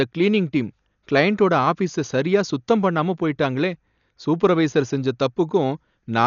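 From start to end the speech is dull and band-limited, with nothing above 7 kHz, and a rough, fluttering noise clings to the voiced sounds. This is heavy damage, likely from Dolby Digital compression at a starved rate that fits about 48 kbps. The encoder cut the top of the band and left many frequency lines without mantissa bits, so the decoder filled them with dither noise. A spectrogram shows a hard ceiling at 7 kHz and grainy, speckled fill between the harmonics.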